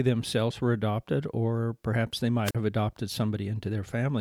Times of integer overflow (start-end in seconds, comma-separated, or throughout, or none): none